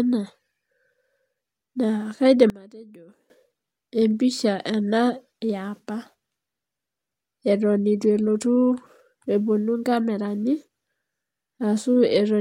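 A speech recording where, from 2.5 to 3.3 s, one stereo channel was likely flipped in polarity, a fault known as one channel inverted. Summed to mono, the shared centre content cancels, so the voice drops by about 21 dB to a faint copy.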